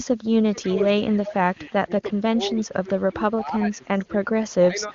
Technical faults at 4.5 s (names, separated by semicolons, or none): echo leak